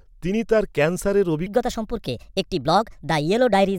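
Playback likely ran on a wrong clock from 1.46 s, after "তিনি তার ক্যান্সারের", to the end: a section at the wrong speed, 1.33 times fast, pitched about five semitones high and hurried.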